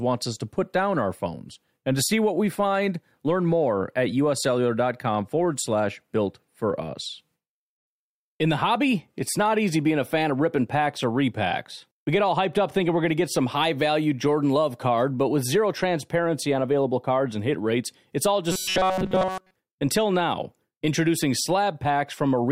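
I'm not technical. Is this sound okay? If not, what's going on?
No. Robotic sound from repeated short buffers, from 18.52 to 19.54 s: for that second the speech turns into a stiff, metallic buzz at about 188 Hz that loosely follows the talking. The likely cause is new audio arriving too slowly, so the playback software kept replaying the same tiny slice of sound, about 5 ms long, across the whole stretch while the real audio was skipped. That constant replay creates the steady buzzing pitch.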